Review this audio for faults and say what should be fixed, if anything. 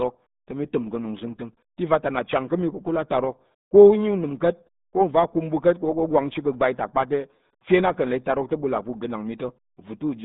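The RealAudio 14.4 codec damage runs throughout. Nothing above 3.8 kHz survives, and the band sits near 150 Hz to 3.7 kHz. Speech sounds muffled and gargly. The heavy smearing fits an 8 kbit/s dial-up codec. Re-encode from the original source with a modern wideband codec.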